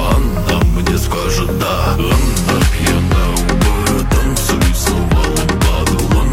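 At 5.80 s a corrupt frame is decoded: a single compressed frame arrived with flipped bits, and the decoder played it as if it were valid. Misread codes and gains put energy at the wrong frequencies for the span of that frame, heard as a short chirp, squeak, blip or burst of noise peaking around -20 dBFS. On a spectrogram it shows as a narrow vertical smear of unrelated energy; on the waveform, as a brief, out-of-place burst.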